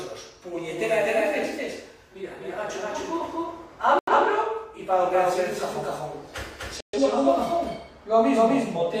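From start to finish, a doubled audio track runs under the sound. A second copy at roughly the same level trails by about a third of a second, likely from a slower capture path or an edit holding two copies out of step. Unlike a room echo, it is full-band, with no decay or reverberant colour.

At 3.99 s, a corrupt frame muted hole cuts in abruptly and lasts until 4.12 s. Damaged compressed data was rejected by the decoder and replaced with silence. Because timing is kept, the sound resumes on schedule rather than jumping ahead.

A second muted gap of the same kind opens at 6.81 s and runs to 6.99 s, longer at about 0.18 s. Again the onset is abrupt and the surrounding audio stays in step, which sets it apart from a dropout that loses time.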